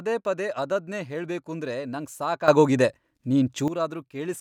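At 2.48 s there's a sudden gain jump: the speech and the background noise both step up by about 12 dB at once and stay there until 3.68 s, when they drop back. It's most likely a digital gain setting applied instantly, with no ramp.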